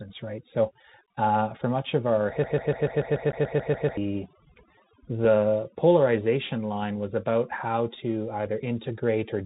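From start to end the speech carries overdone noise removal. The noise reduction was set too hard. Frequency bands near its noise estimate get pushed down or switched off, and the quieter parts of the voice go with them. The background sits near silence with small twinkling specks.

Under that lies the sound of the Bluetooth CVSD headset codec, and its damage is plainly audible. The codec sends one bit per sample, just up or down, with a step size that adapts. The sound fits a 64 kbps link. Nothing above 4 kHz comes through, so the voice is narrow and muffled. A granular hiss runs under it. Sibilants turn scratchy. Loud, bright moments distort where the step size cannot keep up.

From 2.44 to 3.97 s a broken-record loop takes over. A fragment of 145 ms repeats back to back, eleven times over, with no change between copies. The cause is likely a stall in the player or stream, which kept resending the last piece it held. 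The speech that belonged in those 1.5 seconds is gone. It is replaced by the same short stutter.

Inside that loop, at 3.32 s, comes unconcealed Bluetooth headset packet loss. About 11 ms drops out, roughly three packets' worth. Nothing fills the gap, so there is a short hole with hard edges. A second, smaller loss hits at 5.25 s. It lasts about 4 ms, around one packet. It is heard as a tiny break in the voice.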